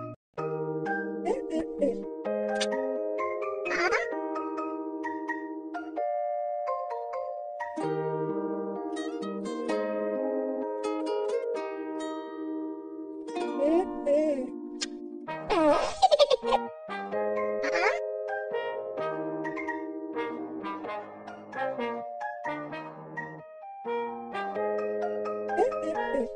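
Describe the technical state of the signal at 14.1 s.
The signal at 14.1 s is intact, with no audible fault at that moment.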